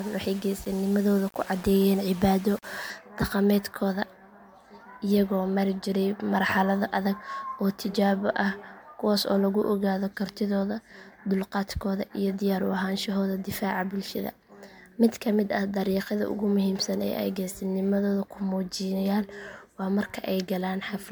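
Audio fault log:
Throughout: generation loss. The sound is swirly, smeared and hollow, with blurred onsets and watery artefacts that pile up well beyond what a single encode at this rate would leave. This likely comes from repeated MP3 encoding near 133 kbit/s, roughly seven passes in all. Each decode and re-encode quantises on a shifted frame grid, so fresh noise and spectral gaps stack on the earlier ones. Content above 20.1 kHz is absent.
0.00–2.90 s: low bit depth without dither. Over this opening stretch the sound carries a grainy, gritty distortion that moves with the signal, growing coarser as the level falls. That pattern points to samples likely rounded to about 6 bits with no dither, so the rounding error stays locked to the waveform instead of spreading as steady hiss. The error sits only about 20 dB below the signal.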